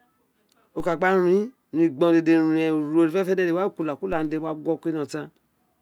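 At 0.80 s and again at 4.13 s the speech carries a DC step: the waveform's zero line jumps by about -28 dBFS, then drains away through a high-pass near 2 Hz. Each step is a low thump or click, and the speech itself continues untouched.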